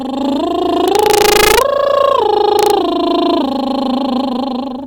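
From 0.88 to 1.61 s and again from 2.59 to 2.70 s, the music's loudest peaks break into violent cracks: integer overflow. In the first stretch the level runs about 2 dB past full scale, and the second barely reaches it. Peaks over the limit wrap around to the opposite sign instead of being held at the ceiling. Clipping would only flatten the tops into a buzzy crunch. Here each peak jumps across the whole range, so the cracks sound far sharper and harsher.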